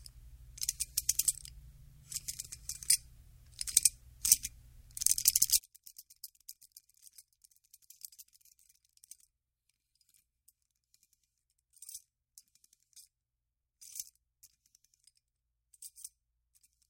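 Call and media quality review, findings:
Mono sum collapses from 5.59 s to end of clip; level down about 31 dB, shared content nearly gone, faint residue remains. Likely one channel inverted: reversed polarity on one stereo leg cancels shared content when summed.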